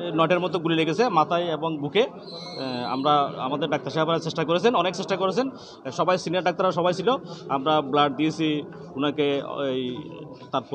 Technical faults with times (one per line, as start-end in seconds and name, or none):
none